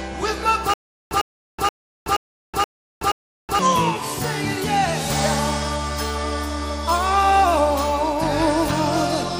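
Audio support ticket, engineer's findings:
Stutter with silent gaps, 0.74 to 3.59 s. Likely playback or stream stall: each retry replays the last buffered fragment, then runs dry. Same 102 ms burst returns six times, every 476 ms, with 374 ms of digital silence between. Intervening audio lost.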